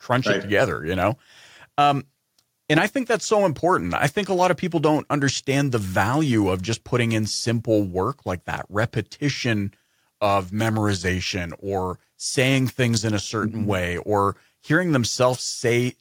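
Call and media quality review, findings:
No faults found in review.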